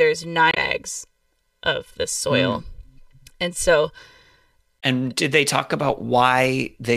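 Damaged data in a compressed stream occurs twice, from 0.49 to 0.58 s and again from 4.76 to 4.83 s. At both points some of the encoded bytes are wrong. The decoder misreads or rejects the frames there, loses sync and searches for the next valid frame header before normal decoding resumes. Instead of clean speech, each spot produces a chirp, squawk, click or short hole, about 90 ms long the first time and about 66 ms the second.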